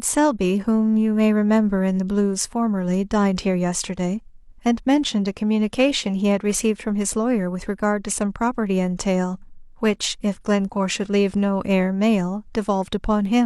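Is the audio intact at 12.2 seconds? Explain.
Yes, the speech at 12.2 seconds plays through intact, with no dropout, click, distortion or other fault at that moment.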